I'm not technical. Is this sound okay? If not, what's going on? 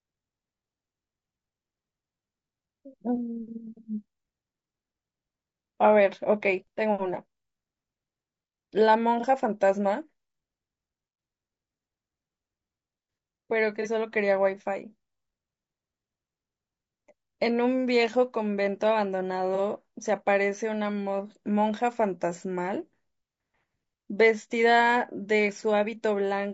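No. Two problems can be heard in this speech.

The first runs through the whole clip. The voice sounds rough and grainy, with a hiss woven between the tones of the voice and a top end that seems thin and artificial. That points to heavy low-delay AAC compression, likely the AAC-ELD kind used for video calls. It is unlike background noise because the graininess rises and falls with the voice and stops when the voice stops.

The second is AAC frame loss with concealment, which happens three times: at 9.20–9.25 s, 13.82–13.87 s and 19.55–19.59 s. Each time a tiny piece of the audio went missing, and the playback smoothed over the gap instead of leaving it silent. What you hear is a brief smeared, noisy or hollow-sounding blip in the voice. It differs from a click because there is no sharp tick, and from a dropout because the sound never goes silent.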